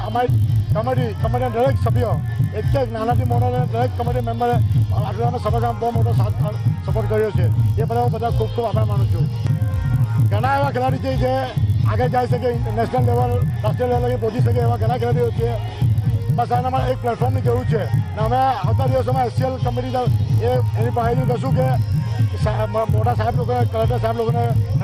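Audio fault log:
throughout: resampler restarted on every block. Each 20 ms block is converted on its own, consistent with a 24 kHz to 48 kHz conversion, so every block edge is computed without its true neighbouring samples, leaving a small error that repeats as a 50 Hz buzz present only while sound plays.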